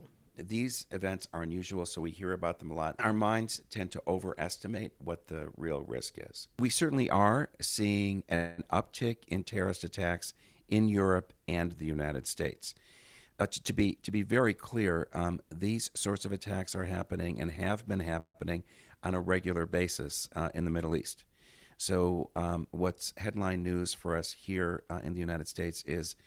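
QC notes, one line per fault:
8.35–8.61 s, call audio freeze: packets likely stalled and the jitter buffer ran dry after "certainly are seeing", so about 0.22 s of fading buzz fills the wait before "uptick in terrorist attacks" resumes where it left off, with nothing lost.
13.31–15.22 s, jitter buffer speed-up: a backlog built up in the buffer, and the receiver trimmed short pitch-period slices repeatedly, roughly a fifth of a second in all, so the speech runs about 12% fast at unchanged pitch and sounds rushed leading into "these sorts of attacks".
18.20–18.37 s, call audio freeze: a second likely packet stall after "happening and have been" leaves about 0.15 s of filler, the last sound stretched into a fading buzz with roughly 70 ms of silence, then the speech carries on intact, just later.
24.48–25.39 s, jitter buffer speed-up: excess buffered audio is cut back again by dropping short pitch-length pieces, around 150 ms in total, making this stretch about 17% faster at the same pitch, noticeably hurried.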